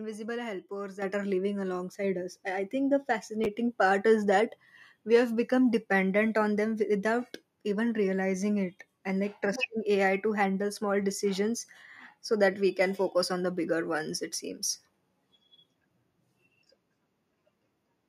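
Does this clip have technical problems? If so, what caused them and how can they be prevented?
Yes. At 1.02 s, just before "are living", the microphone volume is stepped up by about 8 dB. At 2.04 s, between "are living" and "us I I think", it steps up again by about 3 dB. The call software judged the input too quiet and raised the device gain in single jumps, so the voice and background noise rise together. The waveform envelope and noise floor each show a sudden, sustained step, and the spectrogram brightens across all frequencies at once. Prevention: turn off automatic microphone gain adjustment in the call software, or apply gain changes as slow ramps instead of steps.

Between 3.44 and 3.46 s, after "I I think the" and before "part is that we", there are chunks out of order. A 10 ms chunk of audio arrives one chunk late and plays after the chunk that should follow it. Nothing is lost, but the swap creates hard joins that sound like a brief jumbled moment. 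On the waveform the joins appear as abrupt discontinuities, and the spectrogram shows thin vertical broadband lines at those points. Prevention: write or play buffered audio strictly by sequence number or timestamp, and hold late chunks in a reordering buffer before output.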